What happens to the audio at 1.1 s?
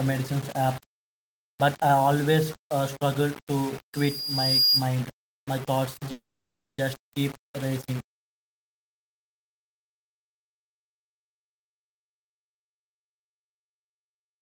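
At 1.1 s, as throughout the clip, the speech carries grainy distortion that tracks the signal, with quiet stretches turning gritty or sputtering. The likely cause is low bit depth without dither, consistent with 5-bit rounding, leaving error only around 20 dB below the speech.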